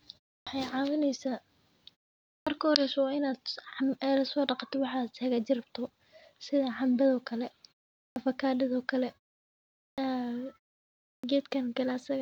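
A speech recording with a clipped start after a pause at 0.41, 2.41, 8.1, 9.92 and 11.18 s: after gaps of 0.3 to 0.81 s, each phrase bursts out of silence with roughly 55 to 61 ms of its onset missing. The output device evidently sleeps during silence and needs that long to wake. Unlike muted pauses, which quieten the gaps without losing speech, these leading sounds are actually gone.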